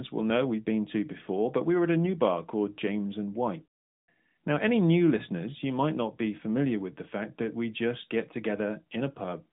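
No technical faults are audible.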